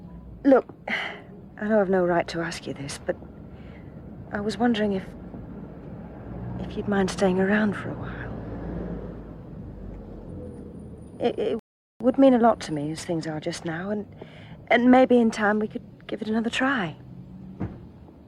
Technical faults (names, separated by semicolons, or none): rebuffering stall